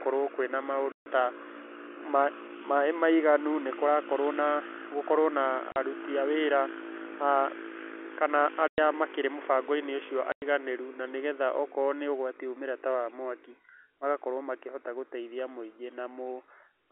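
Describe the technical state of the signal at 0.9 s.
Packet loss filled with silence runs from 0.92 to 1.06 s. A 140 ms stretch of the stream never arrived, and the receiver played digital silence in its place, which fits seven lost 20 ms packets. The speech stops dead in a clean hole with hard edges at each side. The narrowband telephone sound of the G.711 line carries on either side of the gap.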